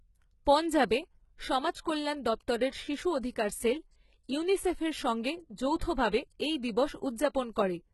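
From start to finish the speech carries heavy codec damage, with nothing above 11.8 kHz, and the treble below that cutoff sounds rebuilt rather than recorded, likely from HE-AAC compression at a bitrate low enough to fit around 16 kbps. Unlike a plain low-pass or ordinary AAC, the top band is still present, but it is copied up from lower bands under a coarse envelope, so its harmonics fail to line up with the body of the sound and s sounds turn gritty or metallic.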